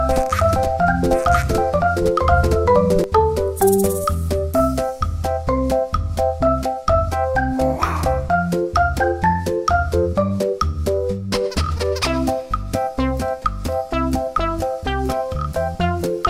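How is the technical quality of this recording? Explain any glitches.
The one real glitch is a doubled audio track at the very start. It's already going when the clip opens and runs to 3.04 s, where the second copy cuts out abruptly. A full-band duplicate trails the original by about a second at roughly the same level, with no decay or room colour, so it reads as a flat echo. The likely cause is the signal being captured twice, once through a slower path.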